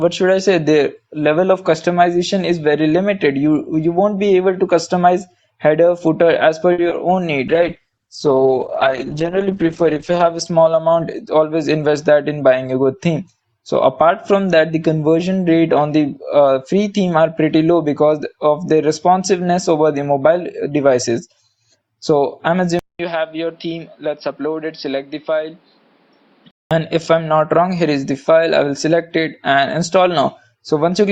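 Between 6.72 and 6.92 s there is repeated packet loss with a robotic sound. In that fifth of a second the stream breaks four times. About 90 ms is covered by stretching the last good sound, and about 30 ms is simply missing. The longest hole is 60 ms, and close to half the span is concealed. Unlike a single dropout or a crackle, the holes come in quick succession and are smeared over by repetition, so the sound turns choppy and robotic.

From 22.79 to 26.71 s the sound most likely comes from an input switched to a poorer device. A 200 ms silence marks the change. After it, nothing is heard above 5.5 kHz, the level drops by around 5 dB, and a different background noise sits roughly 35 dB under the signal. A plain EQ or low-pass filter would not produce the gap, the level step or the new noise floor. Together they point to different hardware, and the fuller sound returns at 26.71 s.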